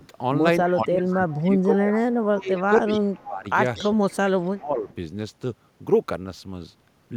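A loudspeaker on the far end is likely feeding its microphone, and the echo canceller is not removing all of it, so an echo leak sends a delayed copy back about 238 ms behind the original. It first surfaces as a faint scrap from 0.0 to 0.08 s, roughly 30 dB down, and then as a plainer shadow from 0.68 to 1.41 s, around 20 dB below the main speech.

Overlapping that, from 0.65 to 3.48 s, the canceller likely cannot tell the local talker from the returning loudspeaker sound during double talk. It turns both down, so the speech is suppressed in double talk. For about two seconds of that span the talker dips, falling by as much as about 20 dB.

Within that stretch the echo leak returns from 2.43 to 2.63 s at roughly 25 dB down and from 2.87 to 2.99 s at roughly 20 dB down. It is strongest from 3.76 to 3.89 s, only about 15 dB under the speech.

A second double-talk suppression runs from 3.85 to 4.88 s, pulling the talker down by up to about 20 dB for roughly a second.

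A last, faint echo fragment follows from 4.89 to 4.95 s, about 35 dB down.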